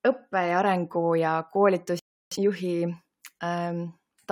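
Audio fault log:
1.99–2.32 s, rebuffering stall: the player used up its downloaded audio and halted until more data arrived, so the speech cuts to silence for 0.32 s, then resumes exactly where it stopped, losing nothing but stretching the clip by that gap.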